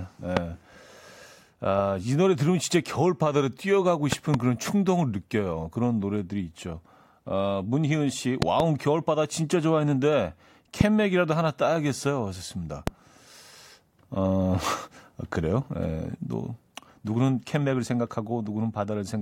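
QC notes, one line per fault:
0.37–0.39 s: loud pop. A single sharp pop roughly 20 dB above the speech, most likely a brief voltage pulse from a plug, switch or static.
4.12–4.36 s: loud pop. Two pops in quick succession, about 20 dB over the speech, which continues underneath; likely a double electrical transient from connector or switch contact.
8.42–8.62 s: loud pop. A pair of close pops around 20 dB above the signal, likely a repeated voltage step that downstream circuitry shaped into short thumps.
10.81–10.83 s: loud pop. One short pop roughly 20 dB over the speech, likely caused by a momentary electrical pulse added to the signal path.
12.87–12.90 s: loud pop. A single sharp pop about 20 dB above the speech, with the speech carrying on beneath it; a static or driver glitch is the likely source.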